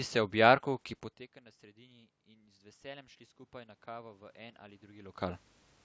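From 1.74 s, just after "jarku ki poteka na", the speech and room noise swell together until 5.49 s, rising by about 6 dB. This is automatic gain rising: after the talker moved back around 1 s, the input dropped by about 24 dB, and the gain control slowly raised its gain to compensate.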